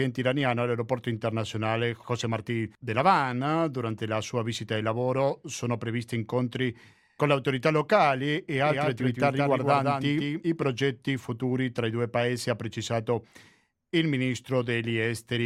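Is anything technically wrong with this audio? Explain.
Yes. From 8.65 s to 10.63 s, just after "le autorità locali e" and ending before "futuri tra i due", the speech is heard twice: a second full-band copy trails roughly 150 ms behind, about 5 dB quieter, with no reverberant tail, and it cuts in and out abruptly. This is a doubled audio track, most likely caused by the same signal being captured again through a slower path and mixed back in out of step.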